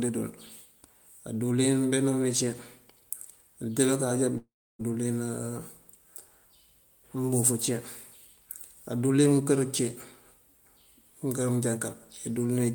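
Long network dropout, 4.37 to 4.81 s: the speech decays into a fading buzz, then 0.3 s of silence, likely lost packets, and resumes with 0.42 s missing.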